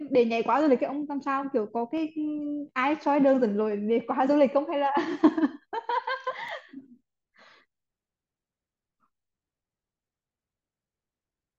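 Speech with two sharp single clicks, at 1.98 s and 6.49 s. Each is likely dropped samples: a fraction of a millisecond lost, so the waveform jumps abruptly.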